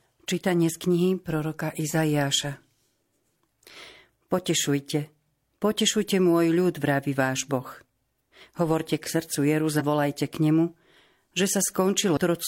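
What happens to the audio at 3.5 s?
Nothing goes wrong at 3.5 s: the speech carries on intact through that moment, with no dropout, click or distortion to be heard.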